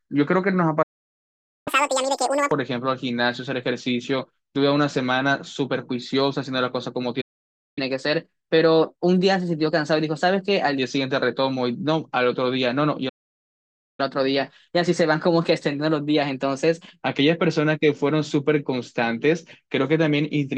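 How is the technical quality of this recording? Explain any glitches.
The speech is interrupted three times by playback stalls, each followed by a sped-up catch-up.

Playback stall at 0.82, 7.21 and 13.09 s: the sound drops to silence for 0.84, 0.56 and 0.90 s, likely because the player's buffer ran dry, then resumes.

Catch-up at higher speed at 1.68 to 2.51 s, 7.78 to 10.78 s and 14.00 to 17.00 s: the player resamples its backlog to recover lost time. The first runs at 2× speed, nearly an octave higher; the later two run at 1.1×, about a semitone or two sharp, before returning to normal.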